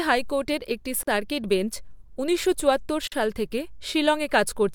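Speech with two 44 ms holes, at 1.03 s after "হাইকোর্টের একটি" and 3.08 s before "সাল থেকে": a gap between chunks, silence inserted at 2-second joins, likely by codec padding or late playback.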